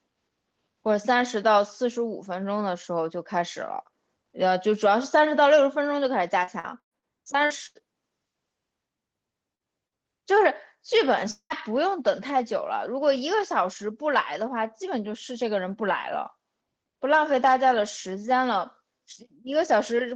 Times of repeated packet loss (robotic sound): 6.43-7.05

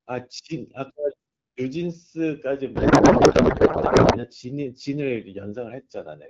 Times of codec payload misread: 2.75-4.25

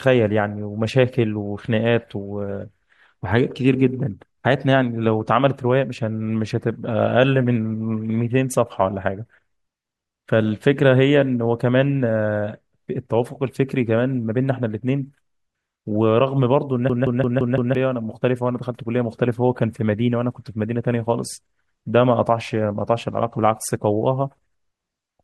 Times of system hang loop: 16.90-17.75

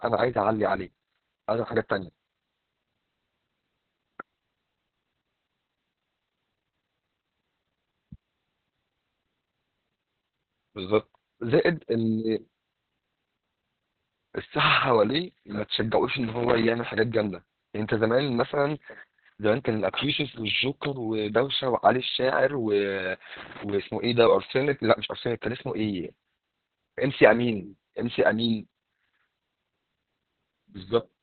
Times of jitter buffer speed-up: none

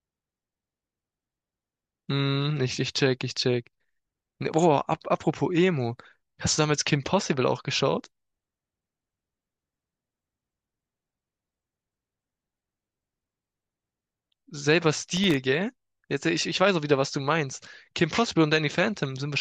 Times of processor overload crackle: 14.96-15.37

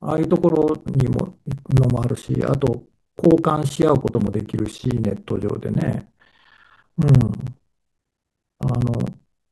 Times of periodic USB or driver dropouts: 0.10-9.46

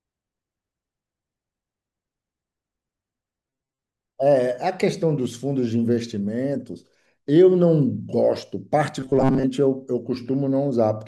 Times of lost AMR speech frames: none

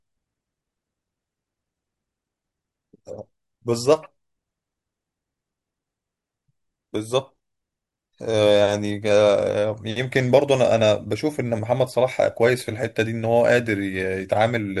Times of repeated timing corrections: none

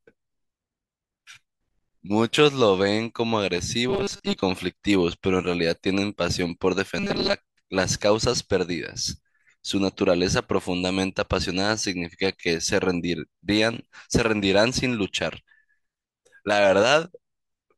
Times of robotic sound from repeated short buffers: 3.89-4.42, 6.98-7.34

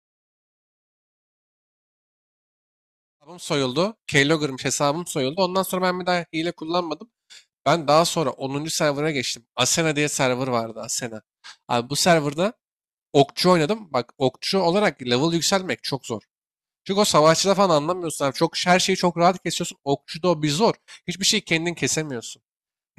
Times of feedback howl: none

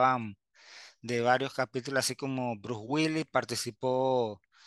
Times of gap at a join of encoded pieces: none

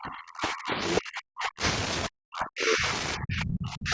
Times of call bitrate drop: none

